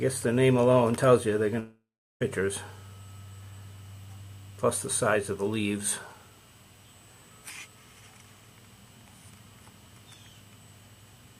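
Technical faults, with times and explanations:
throughout: USB whine. Current drawn by the USB bus in 125-microsecond microframes leaks into the audio through power or ground, leaving a thin, fixed-pitch 8 kHz whine sitting around 40 dB below the sound for the whole clip.
1.59 to 2.22 s: long network dropout. A likely stall in packet delivery left about 620 ms of audio missing. The receiver stretched the last sound into a fading buzz or hiss, then about 350 ms of near-silence, before the audio resumes further on with that stretch lost.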